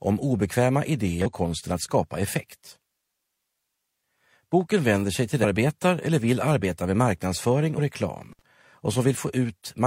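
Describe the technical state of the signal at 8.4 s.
At 8.4 s the signal is inside an intermittent contact fault running from 8.30 to 8.42 s. A loose connection in the signal path breaks for a moment, so the audio drops out for about 62 ms, with crackle where the contact opens and closes and faint hiss while the line is open. On a waveform this shows as a sudden collapse to near-flat, flanked by sharp spikes. A spectrogram shows a vertical gap bounded by broadband clicks.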